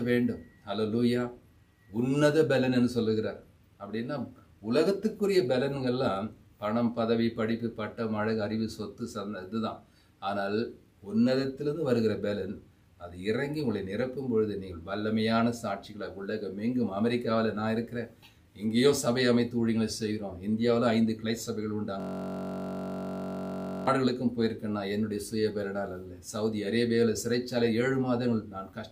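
From 22.00 to 23.87 s, the computer or its audio driver froze while the output hardware kept replaying the same ring buffer, a system hang loop. A 21.33 ms slice, which fits a 1024-sample buffer, repeats exactly, giving a steady buzz at 46.9 Hz.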